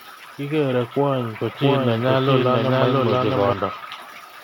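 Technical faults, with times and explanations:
1.55–3.53 s, doubled audio track: a second full-band copy of the speech runs roughly 0.7 s behind at about the same level, likely captured again through a slower path. Unlike an echo, it has no decay or room colour and starts and stops abruptly.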